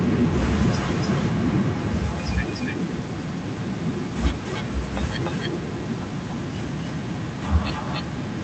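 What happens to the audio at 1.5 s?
At 1.5 s the sound carries an echo with no canceller, and that echo runs through the whole clip rather than starting there. The far end is replaying the call through a loudspeaker into its own microphone, and nothing subtracts that path, so the signal returns after the network round trip. Each phrase is trailed by a copy around 300 ms later, about 10 dB quieter and thinner than the direct sound.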